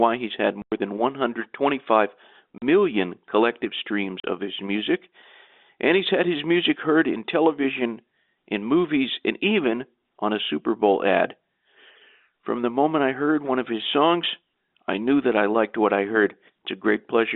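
Packet loss filled with silence cuts clean holes at 0.62 s (100 ms, after "he's had"), 2.58 s and 4.2 s (40 ms each, before "of his music"); the lengths fit 20 ms packets over the telephone-band line.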